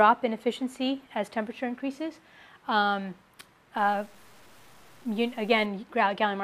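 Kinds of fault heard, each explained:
Low bit depth without dither: from about 3.78 to 5.66 s the sound turns grainy and gritty, with a rough distortion that moves with the signal, roughly 35 dB below the level of the sound. Quieter moments get coarser and can sputter toward silence. The likely cause is the signal being cut down to very few amplitude steps and truncated without dither, which fits 8-bit truncation, so the rounding error tracks the waveform.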